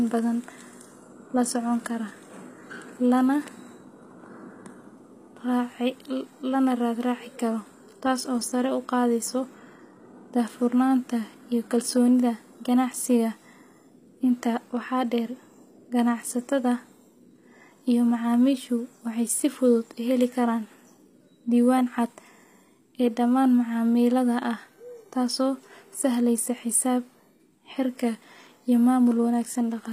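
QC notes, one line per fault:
Throughout: HE-AAC compression, plainly audible across the speech, likely from HE-AAC v2 at a low rate consistent with about 24 kbps. The lower spectrum is coded directly, while the treble is rebuilt by copying lower bands upward under a coarse envelope, so s sounds come out gritty and metallic. On a spectrogram, the upper band shows repeated, smeared copies of lower patterns with misaligned harmonics, and there is no energy above 15.5 kHz.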